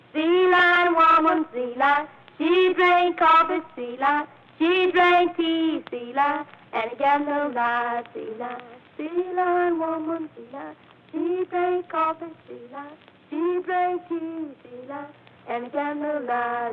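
No technical faults are audible in this audio.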